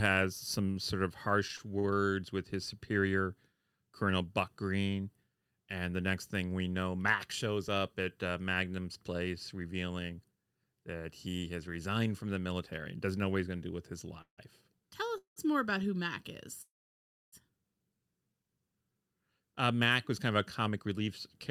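From 0.71 to 1.87 s, repeated stalls (stutter): four brief gaps, the longest 50 ms, are filled by continuing the sound. Unlike a freeze, it is a string of short hitches, not one held pause.

Call audio freezes at 14.22–14.41 s (161 ms), 15.18–15.39 s (187 ms) and 16.62–17.35 s (707 ms) fade into silence lasting 120, 120 and 640 ms. The likely cause is delayed packets, after which the sound resumes where it stopped.

From 20.20 to 21.08 s, a jitter buffer speed-up runs the audio at 108% speed with unchanged pitch, trimming roughly 70 ms. It sounds hurried rather than broken, with no gaps.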